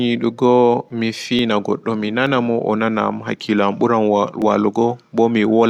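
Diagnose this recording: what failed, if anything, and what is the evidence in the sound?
Three isolated sharp clicks in the speech, at 1.39, 2.27 and 4.42 s, each a thin vertical line. Likely dropped samples, under a millisecond lost per event, at the driver or buffer stage.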